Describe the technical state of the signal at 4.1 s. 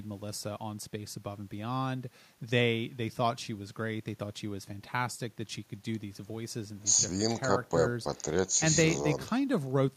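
At 4.1 s the speech signal is intact, with no audible fault at that moment.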